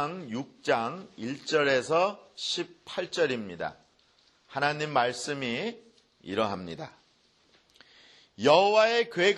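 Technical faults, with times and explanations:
No technical faults detected anywhere in the recording.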